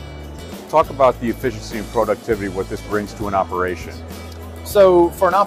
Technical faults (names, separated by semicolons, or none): hard clipping